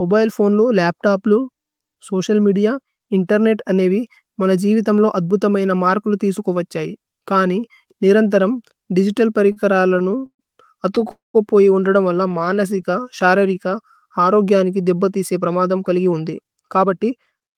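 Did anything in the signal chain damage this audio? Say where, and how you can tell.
Yes. Repeated stalls (stutter) come from the network side: late packets keep draining the jitter buffer. Speech drags and catches at 9.47–10.41 s (longest hold 129 ms), 10.95–11.11 s and 12.29–12.59 s.

A call audio freeze at 11.11–11.36 s was likely caused by packets held up in transit. The last sound trails off into about 160 ms of silence before "ഹി ഉന്രദമ് വല്ല" resumes.

A jitter buffer slow-down from 12.23 to 14.21 s rebuilds the reserve by repeating pitch periods. The speech runs at 92% speed with unchanged pitch, stretched by 167 ms.

A jitter buffer speed-up after "ഗ്യനികി ദേബ്ബ തിസ്കേ പ്രമദമ്" trims excess delay by cutting pitch periods. From 15.98 to 17.56 s the speech sounds hurried at 111% speed, losing about 0.2 s.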